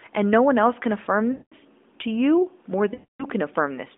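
At 1.32 s and again at 2.94 s, lost AMR speech frames break the speech. The decoder repeats its last good settings with falling gain. The sound drags, then fades out. The gaps last about 0.2 s and 0.3 s. The narrowband phone sound carries through both.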